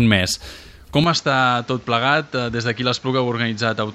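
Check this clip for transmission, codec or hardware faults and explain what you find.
Input switched to a poorer device, from 1.04 s to the end: the recording most likely moved to a different, lower-grade input, whose narrower band cuts everything above 7.6 kHz. With no gap at the change, the sound turns duller and somewhat quieter and carries a new, faint background noise.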